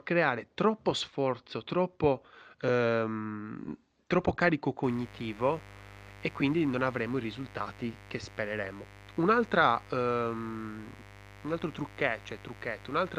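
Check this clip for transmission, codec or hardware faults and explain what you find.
One hardware fault: mains buzz from 4.83 s, just after "troppo ehm troppo carico", to the end. Switching spikes at twice the 50 Hz rate produce a raspy buzz about 20 dB below the speech, unlike smooth low hum.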